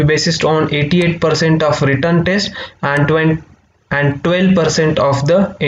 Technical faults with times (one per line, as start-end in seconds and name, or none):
none